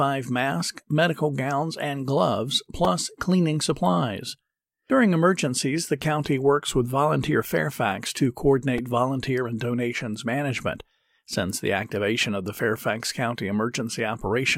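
A repeated buffer occurs at 2.85 s, between "medical gowns and gloves" and "cleaning supplies". It returns at 8.78 s, before "volunteer and donations management", and at 11.33 s, just after it. New audio arrived late each time. A 2.67 ms block, which fits a 128-sample buffer, played twice more. Each event is a brief buzzy click.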